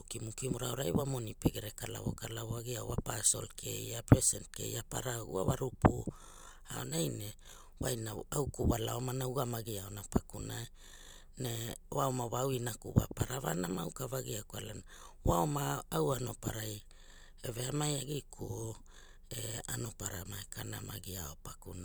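Nothing goes wrong anywhere in the speech here, so there are no technical faults to walk through.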